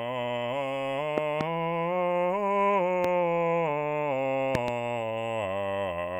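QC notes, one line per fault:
1.18–1.43 s, 3.04–3.07 s and 4.55–4.70 s, loud pops: two, one, then two sharp pops, each about 15 dB above the music, which carries on underneath. This is likely a sudden voltage pulse, from a plug, switch or static, added to the signal.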